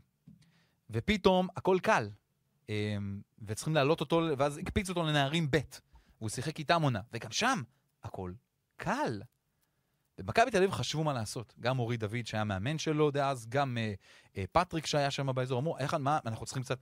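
There are no technical faults to describe at any point in the recording.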